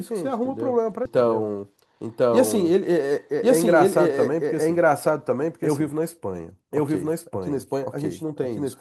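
A doubled audio track runs through the whole clip: a second full-band copy of the speech sits roughly a second behind the first, at about the same level. It has no reverberant tail or room colouring, so it is an exact duplicate. This most likely comes from the signal being captured twice, with one copy arriving by a slower path.

At 1.05 s there is a skip ahead. Around four-tenths of a second of speech is missing, and playback jumps straight to later material with no silence or fill inserted. This happens when queued audio is discarded, typically by an overflowing jitter buffer, so the delay shrinks by the same amount. The two sides of the cut butt together almost directly, giving an abrupt, clipped transition.

From 1.63 s to 1.94 s a jitter buffer speed-up follows. Playback runs at about 114% while pitch stays the same. The receiver trims short pitch-period segments in quick succession, roughly 50 ms in total, to bring its excess buffered delay back toward target. 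Over that 0.3 s stretch the speech sounds hurried, with syllables compressed in time.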